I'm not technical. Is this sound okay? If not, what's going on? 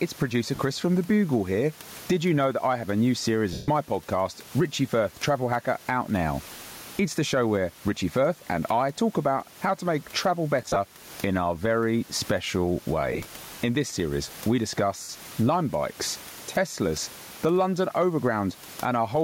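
No. Two things go wrong. First, there is gain pumping all the way through: the level is pulled down each time the voice gets loud, so loud and soft parts end up closer together and everything sounds squashed. The likely cause is the microphone level being set far too high, with an automatic limiter yanking it back down on every loud moment.

Second, there are lost LE Audio frames, short dropouts in the Bluetooth wireless link. They come at about 0.55 s (40 ms), 3.53 s (the longest, 150 ms), 10.62 s (scattered over 140 ms), 13.13 s (scattered over 120 ms) and 15.03 s (60 ms). Each sounds like a brief hissy smear in place of the voice. During the 3.53 s gap it fades away toward silence, because the receiver fills missing pieces with a noisy copy of what it last heard.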